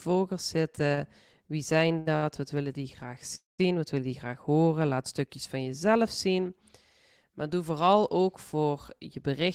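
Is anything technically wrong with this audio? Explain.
Yes, the speech has two timing faults. Repeated stalls (stutter), 0.75 to 2.25 s: the jitter buffer kept running empty, so six short gaps, the longest 69 ms, were filled by continuing sound, making it drag.

Call audio freeze, 3.35 to 3.61 s, after "willen die graag": likely held-up packets emptied the buffer, inserting a 233 ms gap that fades to 170 ms of silence before resuming.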